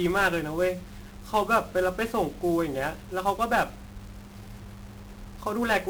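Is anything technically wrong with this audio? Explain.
Yes, the whole clip carries heavy 1-bit DFPWM compression damage from start to finish. Each sample is reduced to a single up-or-down bit that nudges an adaptive level, so the speech is only loosely tracked and the rounding error is huge and spread across the whole band. You hear a constant fuzzy, crackly grain over everything, with the upper end smothered in hiss. The coarseness fits DFPWM running at around 48 kbps.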